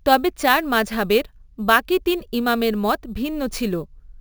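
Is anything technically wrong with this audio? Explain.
Yes. Throughout the speech there is imaging from sample-and-hold upsampling. The audio was converted from 16 kHz to 44.1 kHz by holding each sample rather than interpolating through a smoothing filter, so mirror copies of the spectrum were left behind. The first copy fills 8 to 16 kHz at about 19 dB below the speech, heard as a bright metallic fizz that tracks its level. On a spectrogram, the harmonics appear reflected above 8 kHz, with the mirrored pitch contours moving opposite to the originals. The waveform shows small flat steps.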